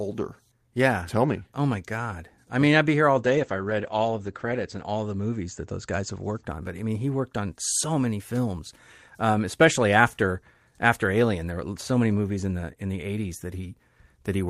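A speech recording with a call bitrate drop from 3.18 to 6.49 s. The encoder's rate falls from 32 kbps to 13 kbps and stays at its lowest for 1.4 s. Audio bandwidth narrows from 20 kHz to 8 kHz, so the speech turns muffled and coarse until the rate recovers.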